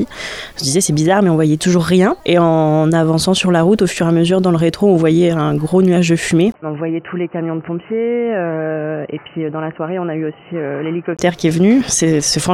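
Input switched to a poorer device, from 6.52 to 11.19 s. After a 20 ms gap, the sound turns dull and boxy, with nothing above 3 kHz. The level drops about 10 dB and a new background noise appears, about 35 dB below the signal. This is likely from recording moving to a narrower-band microphone.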